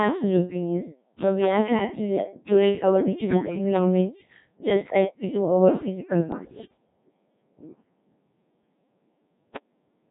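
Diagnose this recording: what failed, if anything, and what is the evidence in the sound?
The codec stage failed throughout. The speech has been rebuilt by a Codec 2 vocoder: it sounds heavily robotic and buzzy, with no natural waveform texture, which fits a rate near 1.3 kbit/s. Unlike ordinary low-bitrate smearing, the voice is resynthesised from pitch and spectral-envelope parameters.

Bit errors on digital voice radio hit the channel feeding that vocoder. After "to actively curate our", from 3.24 to 3.58 s, and after "we do our physical", from 6.32 to 6.78 s, the voice lurches in pitch and level and breaks into warbling gibberish. Corrupted frame parameters, at roughly one bit in ten and about 7 percent, cause this, not silent dropouts as in packet loss.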